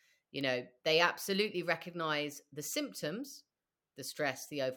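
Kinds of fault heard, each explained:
Bit error spike: at 0.41 s, just before "know they absolutely recognize", one flipped bit throws a single sample to about -27 dBFS, heard as a sharp broadband tick.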